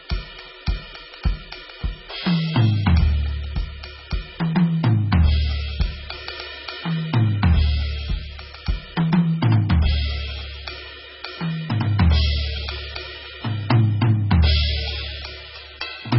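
Throughout the whole music clip the sound is dull and watery, with a swirling, bubbling texture and smeared attacks. Nothing is left above about 5.6 kHz, so the top end is simply missing. This is likely heavy MP3 compression, at a very low bitrate that fits something near 16 kbps. Starved of bits, the encoder cut the treble at a fixed frequency and dropped weak frequency lines, which flicker in and out from frame to frame.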